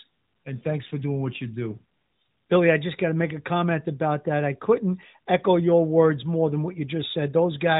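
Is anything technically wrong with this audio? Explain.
No, nothing is technically wrong with this audio.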